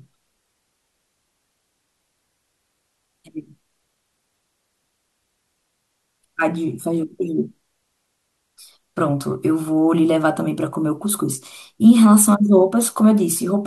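Listening to this speech recording, nothing stood out as a technical problem at any point.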